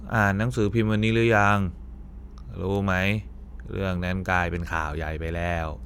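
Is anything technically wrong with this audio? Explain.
Yes, there are word clock ticks, about five of them, roughly once a second from 0.69 to 4.83 s. The receiving device isn't locked to the sender's clock, so every time the two drift a sample apart, one sample gets dropped or repeated. The result is a sharp tick at a steady pace, which suggests clocks about 20 ppm apart.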